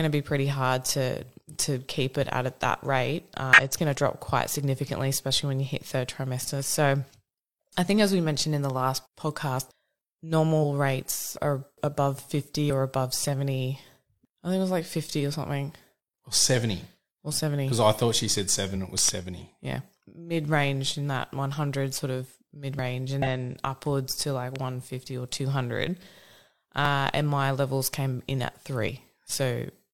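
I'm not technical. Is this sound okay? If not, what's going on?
No. The audio has three kinds of fault.

Damaged data in a compressed stream, at 3.53 to 3.60 s and 23.22 to 23.26 s: part of the compressed file is corrupted. The player misreads those few hundredths of a second and searches for the next clean frame, producing a short chirp or squawk.

Loud pops, a pair at 18.98 to 19.11 s and a single one at 24.56 to 24.58 s: sharp pops sit on top of the speech, which continues underneath. The cause is likely a sudden electrical spike, such as a plug, switch or static discharge.

Dropped buffers (overrun), at 22.79 s and 26.85 s: each is a spot where the speech jumps forward by roughly a hundredth of a second. Likely the recording software fell behind and the hardware overwrote that slice before it was saved.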